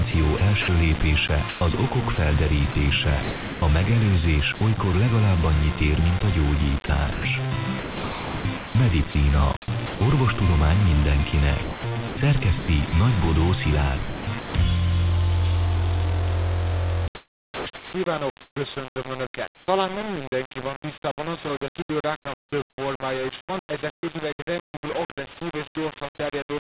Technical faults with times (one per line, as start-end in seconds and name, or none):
0.00-26.64 low bit depth without dither
0.11-4.61 sound chopped by the voice detector
6.86-10.01 sound chopped by the voice detector
11.63-14.54 sound chopped by the voice detector
17.15-19.67 sound chopped by the voice detector
22.40-22.52 comfort noise in place of the background
25.34-25.37 sound dropped by the voice detector